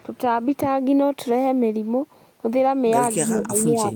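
From 3.25 s to the end, the speech dips by up to about 20 dB. This is speech suppressed in double talk, likely from an echo canceller turning down both its own talker and the loudspeaker echo.

From 3.39 to 3.47 s, a copy of the speech returns 190 ms late, about 10 dB quieter. This is likely echo leak through a loudspeaker path.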